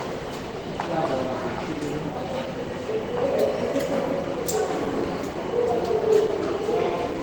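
Across the whole clip the sound carries plainly audible codec damage, likely from Opus compression at a rate around 16 kbps. The encoder runs in its hybrid mode, so textures come out hoarse and grainy, although content reaches about 20.3 kHz.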